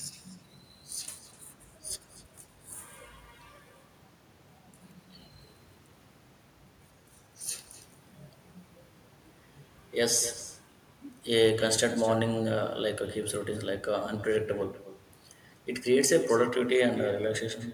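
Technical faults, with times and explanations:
Throughout, echo with no canceller: every phrase of the speech is followed, around 300 ms later, by a second copy sitting about 16 dB below the direct sound. That copy is what the far end's loudspeaker played into its own microphone, returned over the network with nothing subtracting it. Because it has crossed a loudspeaker and a room, and the network twice, the shadow sounds thinner than the original, trailing each syllable like a slapback.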